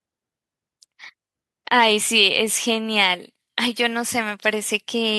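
No audible faults anywhere in the speech, so there is nothing to log.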